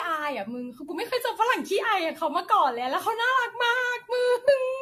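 Throughout, the speech is swirly, hollow and smeared with blurred attacks and nothing above 14 kHz: likely generation loss from around seven AAC-LC re-encodes near 64 kbit/s.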